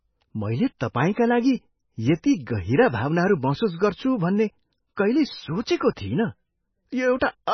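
Heavy MP3 compression at a very low bitrate, likely around 17 kbps, runs throughout this speech clip, cutting everything above about 6.1 kHz and leaving a watery, swirly sound.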